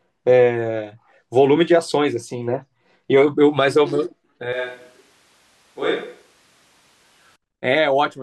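From 4.53 to 7.36 s the speech turns abruptly roomy, hollow and thinner, about 5 dB quieter, with room noise roughly 30 dB below it, likely a switch to a distant microphone.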